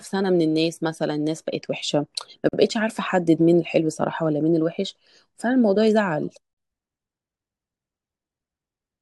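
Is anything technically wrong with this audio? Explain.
Yes. The speech has a gap at a join of encoded pieces twice: about 46 ms from 2.49 to 2.53 s, and about 40 ms from 6.53 to 6.57 s, four seconds apart. The audio was encoded in separate pieces and joined without trimming, so each seam holds the encoder's start-up delay and the padded end frame as silence. The speech drops out abruptly, with smeared edges, then resumes exactly where it stopped.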